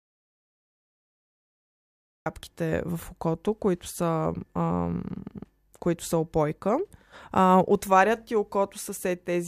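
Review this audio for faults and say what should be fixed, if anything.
The input path most likely lost its signal, through a disconnected device, a dropped link or a mute, while the recorder kept writing silence. The result is an audio dropout to silence already under way when the clip begins, lasting from 0.00 to 2.26 s. There is no room tone at all in that stretch, and the speech comes in abruptly at "в окото които са", with whatever came before it lost. Securing connections, confirming the input is live and unmuted before recording, and watching the level meter from the first second would prevent this.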